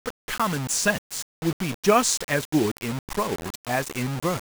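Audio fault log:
throughout: low bit depth without dither. Speech sounds gritty, the distortion following each syllable while quiet tails sputter or drop out; likely rounding to a depth that fits 5 bits, error around 10 dB down. Waveform: stair-stepped levels; spectrogram: broadband haze tracking the speech.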